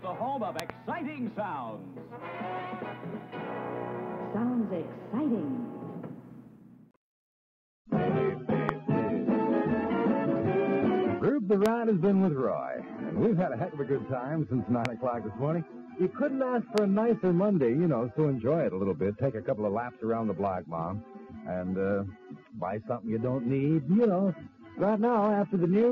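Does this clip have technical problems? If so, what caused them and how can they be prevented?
Yes: loud pops, a double pop at 0.6 to 0.72 s, then single pops at 8.69, 11.66, 14.85 and 16.78 s, each roughly twenty decibels above the sound, which carries on underneath rather than breaking off as in a dropout. Voltage pulses, likely from static, a switch or loose connector, are added to the signal. Secure connections, ground equipment and avoid switching during recording.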